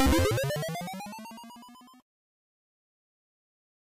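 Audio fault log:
No faults can be heard in this everyday-sound recording. Nothing in the audio points to trouble along the way from capture to playback.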